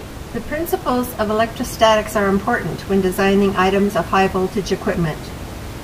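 No system faults are present in this speech recording, and the only background is the room's own noise, sitting about 13 dB below the speech.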